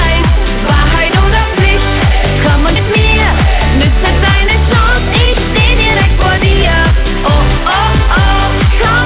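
Throughout the clip, the signal was driven about 7 dB beyond what a stage in the chain could pass, so it suffers hard clipping: every peak is sliced flat, with roughly 15 percent of samples pushed past the limit. Those squared-off tops generate added harmonics, heard as distortion riding on the louder moments. The G.711 mu-law call path carries nothing above 4 kHz.

From 2.76 to 2.78 s there is a skip ahead. Later audio was already queued when a stretch of around 0.4 s was discarded, either in transit or by an overflowing jitter buffer. No fill was inserted, so playback leaps straight forward. Both sides of the cut are butted together with essentially no gap, and the listener hears an abrupt jump where a piece of the sound simply vanishes.

From 4.83 to 7.15 s comes a jitter buffer speed-up. The receiver's buffer was holding more audio than its target. To pull the delay back down, it repeatedly removed short pitch-period-sized slices, about 100 ms in all across the passage. 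Pitch stays where it was, but the audio plays at 105% speed. That is just at the point where it starts to come across as hurried, and any regular rhythm loses its steadiness.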